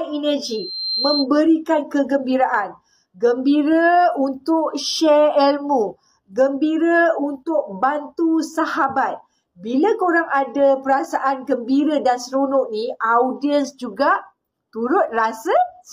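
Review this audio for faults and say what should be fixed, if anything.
A single high tone near 4.1 kHz swells over roughly half a second into a piercing squeal, from 0.45 to 1.27 s, peaking at about the level of the surrounding sound. This is loudspeaker feedback squeal: the microphone re-captured its own loudspeaker, and loop gain exceeded unity at that frequency. To prevent it, lower monitor gain, move the microphone away from or behind the loudspeaker, or notch 4.1 kHz.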